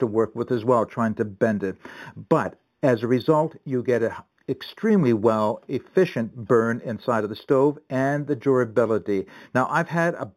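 Throughout, imaging from linear upsampling: crude straight-line interpolation from 8 kHz to 44.1 kHz leaves mirror copies about 30 dB down, a metallic shimmer rather than mere dullness.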